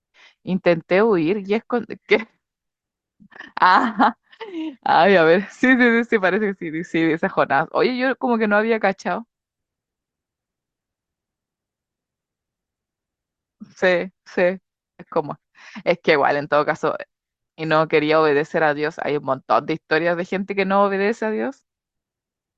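Nothing here stands out as a technical problem, so there's no fault to walk through anywhere in the speech.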